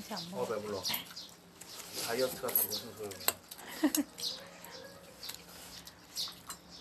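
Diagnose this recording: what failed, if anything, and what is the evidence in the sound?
Nothing failed; no faults are audible anywhere here.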